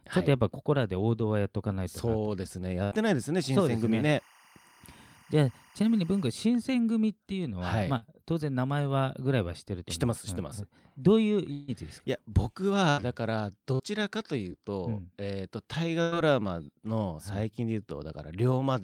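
At 2.83 to 2.93 s there's the first burst of packet loss: about 80 ms of speech went missing, and the receiver held the last sound and faded it before jumping ahead. The same thing recurs at 12.90 to 12.99 s and 16.02 to 16.15 s, where about 80 ms and 100 ms are lost and the second patch runs slightly long.

From 3.56 to 6.26 s you can hear timecode bleed. A 24-frame linear timecode signal has leaked in from a neighbouring line. It sits roughly 30 dB under the speech as a chirpy warble flipping between tones around 1 and 2 kHz.

Short concealed packet loss turns up at 7.97 to 8.04 s, 13.75 to 13.81 s and 14.49 to 14.52 s. Each time, 20 to 40 ms of audio never arrived. The decoder papered over the gap by extending the previous sound, leaving a quick smear or wobble as it blends back.

At 11.52 to 11.70 s about 160 ms drops out. A stretched, fading continuation of the last sound fills the whole gap without ever going silent, and then the speech resumes further along. 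That's likely a long network dropout rather than a short hiccup.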